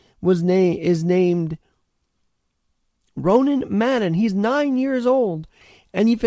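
Clock drift between sender and receiver runs throughout: the sender's clock is about 4 percent fast, so the receiving jitter buffer keeps overfilling with incoming speech. Repeated timing corrections follow from 0.13 to 6.25 s, as the receiver trims short pieces unevenly, running near 104 percent speed. Beneath both, the G.722 call path passes nothing above 8 kHz.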